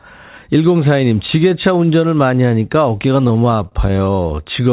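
From 3.16 to 4.36 s, repeated stalls (stutter): the jitter buffer kept running dry, so short stretches, none longer than 29 ms, were filled by extending the preceding sound. Nothing drops out, unlike packet loss.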